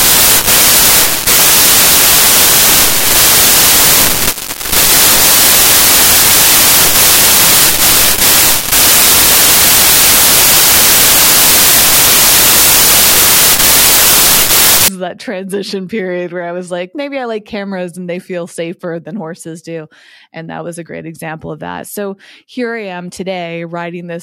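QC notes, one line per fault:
0.00 to 14.88 s, samples built from the wrong bytes. Loud, harsh broadband noise is heard from the start. Each sample's bytes are assembled in the wrong order or offset. So the rapidly changing low bits land in the most significant position. That turns fine detail into large random values, heard as broadband hiss. Correct decoding resumes at 14.88 s, just before "is that transition period".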